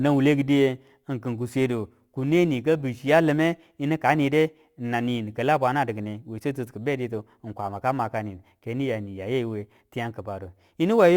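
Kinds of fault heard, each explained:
Crude rate conversion: the speech has been stretched from what sounds like 44.1 kHz to 48 kHz by simply repeating the nearest sample rather than filtering, so roughly one sample in eleven gets doubled on a fixed cycle. That timing error throws off shifted, inharmonic copies of the speech, a gritty, inharmonic fizz riding on the louder and brighter sounds, sitting roughly 30 dB below them and present right through the clip.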